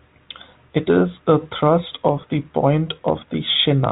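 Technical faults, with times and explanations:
No technical faults detected.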